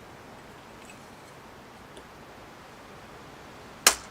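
No technical faults are audible.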